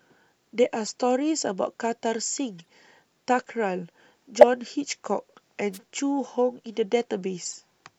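Corrupt frame decoded at 0.86 to 0.91 s, again at 2.58 to 2.69 s and 4.39 to 4.44 s: damaged compressed frames were played anyway, so wrong gains or misread codes pushed energy into the wrong frequencies for roughly the span of each frame. Each event is a brief chirp or noisy blip. The first peaks around -20 dBFS, the second is quieter at around -30 dBFS, and the third jumps to near full scale. Their lengths suggest a couple of frames hit at first, then a few.

Wireless microphone noise hit at 5.73 to 5.78 s: the radio path of an analogue FM microphone faded, letting receiver noise rise over the speech. It comes through as a short swish of static, about 50 ms long.

Corrupt frame decoded again at 7.45 to 7.55 s: another run of a few bad frames gives a garbled burst peaking around -20 dBFS.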